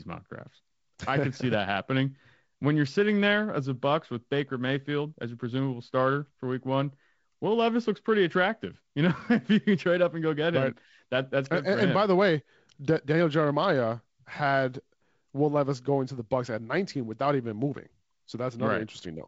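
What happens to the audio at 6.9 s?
Nothing goes wrong at 6.9 s; the speech continues intact through that moment, carried by the G.722 wideband telephone coding that runs through the clip.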